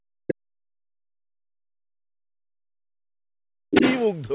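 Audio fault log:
0.00–3.34 s, speech suppressed in double talk: the talker's speech sinks by roughly 40 dB and breaks up, likely from the echo canceller ducking during simultaneous talk.
3.70 s, speech suppressed in double talk: a brief dip of roughly 25 dB, about 40 ms long, again likely the canceller pulling down both talkers at once.
3.71–4.05 s, other side's voice leaking through: a second voice surfaces at about the same level as the speech, likely loudspeaker echo the canceller failed to remove.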